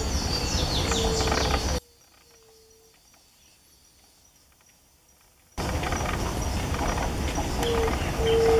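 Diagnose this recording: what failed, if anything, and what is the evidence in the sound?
From 1.78 s to 5.58 s the sound collapses by about 32 dB to a faint residue, consistent with one channel inverted, likely a polarity-reversed wire in the analogue stage. Summed to mono, the shared content cancels. The waveform shows a sharp amplitude trough, and the spectrogram shows all frequencies nearly emptied.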